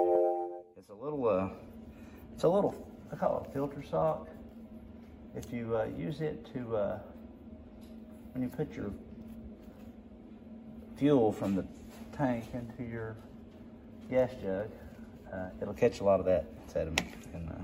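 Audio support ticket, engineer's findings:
No technical faults found on review: signal continuous, levels stable, playback path behaving as expected throughout.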